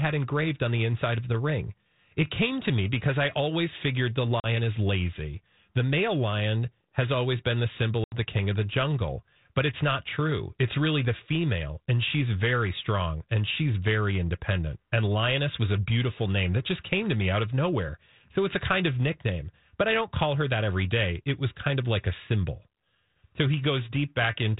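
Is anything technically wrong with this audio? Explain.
Yes. This is speech over a G.726 ADPCM link, band-limited below 4 kHz with a light granular hiss that fits 32 kbit/s. Two packet-loss gaps break it. The first starts at 4.4 s, after "I always figured the" and before "is lazy". It is a hard-edged hole of about 40 ms, which fits roughly two packets. The second starts at 8.04 s, after "always been the symbol" and before "the king of the". It is about 80 ms, which fits around four packets. Each hole is filled with silence. The decoder's adaptive predictor and step size lose track of the sender's, so the speech resumes slightly distorted until it settles. That is by about 4.46 s for the first and by about 8.16 s for the second. A plain dropout would pick up cleanly afterwards. This recovery smear is what marks the fault as ADPCM packet loss.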